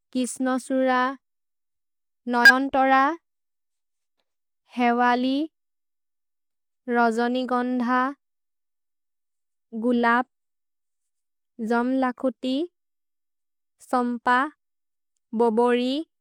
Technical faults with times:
2.45-2.51 damaged data in a compressed stream

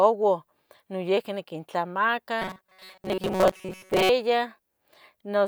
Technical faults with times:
2.42-4.09 robotic sound from repeated short buffers

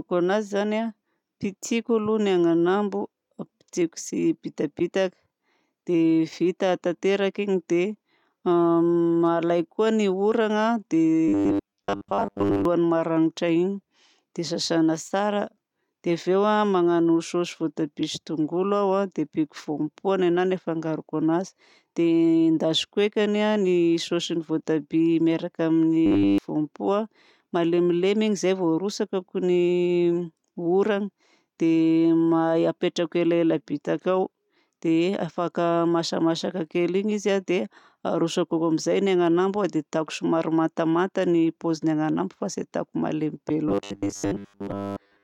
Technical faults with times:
11.28-12.65 robotic sound from repeated short buffers
26.06-26.38 robotic sound from repeated short buffers
43.69-45.23 robotic sound from repeated short buffers

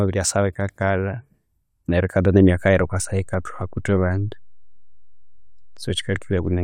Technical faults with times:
2.40-6.63 DC step

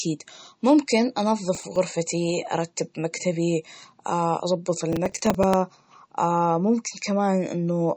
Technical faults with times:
0.00-7.96 MP3 compression
1.55-1.76 processor overload crackle
4.92-5.54 processor overload crackle

